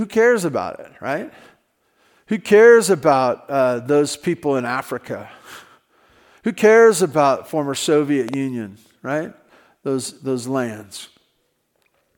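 At about 8.29 s there's a loud pop, actually two pops in quick succession, all over by about 8.36 s. They stick out a few dB above the speech, around 5 dB, and the speech keeps going right underneath them. The likely cause is a sudden voltage step or pulse getting into the signal path, from something like a plug, a switch, a static discharge or a driver glitch, which the downstream circuitry turns into that sharp thump.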